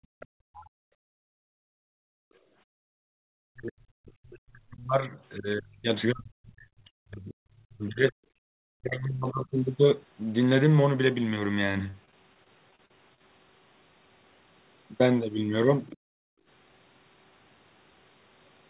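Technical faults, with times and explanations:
0.00–3.04 s, background gated by the echo canceller: while the far end played, the canceller clamped the microphone, dropping room sound by about 33 dB for nearly the whole span.
0.2–0.7 s, other side's voice leaking through: a faint second voice, about 25 dB under the talker, is audible; likely residual loudspeaker echo the canceller failed to subtract.
3.32–8.16 s, speech suppressed in double talk: the talker's level dips, by around 40 dB at worst, likely because both sides spoke and the canceller attenuated everything.
6.68–7.83 s, repeated packet loss (robotic sound): frequent short holes, the longest 17 ms, patched by extending prior sound; about 10% concealed, giving a choppy texture.
8.44–8.48 s, background gated by the echo canceller: a brief 40 ms duck of about 38 dB, heard as a momentary hole in the room tone.
8.76–9.54 s, speech suppressed in double talk: the talker's voice drops by around 35 dB, likely from the canceller suppressing during simultaneous speech.
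11.90–13.21 s, repeated packet loss (robotic sound): recurring gaps up to 41 ms, filled by repetition, about 16% of the stretch concealed, so the sound turns choppy and fragmented.
15.87–15.97 s, other side's voice leaking through: a short scrap of far-end voice, about 25 dB below the talker, slips through, likely incomplete echo cancellation.
15.97–16.47 s, background gated by the echo canceller: room sound ducks by about 33 dB for half a second, then returns when the canceller releases.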